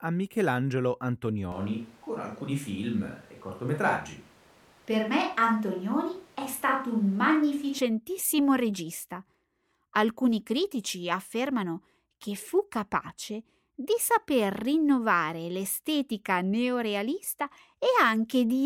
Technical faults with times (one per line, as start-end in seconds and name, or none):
1.52-7.78 switch to a distant microphone